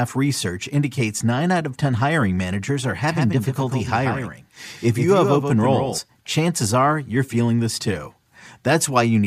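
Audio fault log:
3.10–5.98 s doubled audio track: after "hiring managers are", a dry copy trails by about 150 ms, roughly 5 dB down, likely from a second capture path. Unlike echo, it has no decay and starts and stops abruptly.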